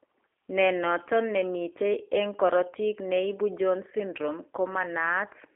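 Speech squeezed through a G.729 codec the whole way, band-limited to about 300 Hz–3.4 kHz with nothing above 3.5 kHz, and a rough, synthetic edge that fits 8 kbit/s G.729A.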